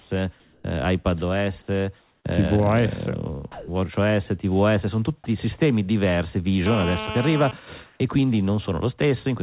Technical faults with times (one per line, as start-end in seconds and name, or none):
0.00-0.10 comfort noise in place of the background
0.40-0.64 comfort noise in place of the background
2.00-2.24 comfort noise in place of the background
3.52-3.68 sound dropped by the voice detector
6.66-7.51 GSM phone buzz
7.86-8.00 comfort noise in place of the background